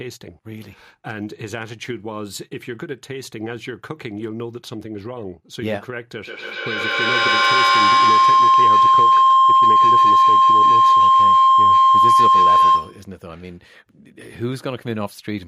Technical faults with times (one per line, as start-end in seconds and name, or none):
6.25-13.15 feedback howl